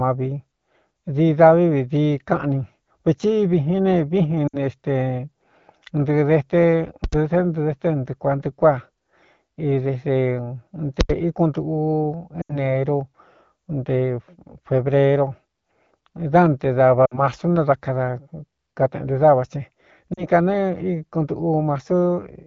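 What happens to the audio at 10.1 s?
Nothing happens at 10.1 s: the speech carries on intact through that moment, passing through the AMR wideband (HD Voice) codec at 12.65 kbit/s, a rate at which it stays clear.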